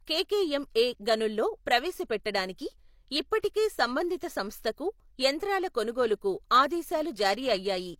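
It's a speech clip with two separate problems. First, there's pre-echo from about 3.39 to 3.44 s, a roughly 47 ms smear of hiss right before "సంబంధిత సంస్థకు యంత్రాల" begins. That's a transform codec at work: the quantisation noise was spread across the whole block, so the noise meant to be masked by the loud onset leaks into the quiet gap ahead of it, and the attack comes out softened. Then, after that same phrase "సంబంధిత సంస్థకు యంత్రాల", from about 6.01 s to the end, there's periodic clock jitter. Something is wobbling the converter clock at around 400 Hz, which puts sidebands at that spacing on either side of everything in the signal. The result is a gritty, metallic edge on the speech, strongest on the brighter high-frequency parts, and it drops away whenever the sound goes quiet.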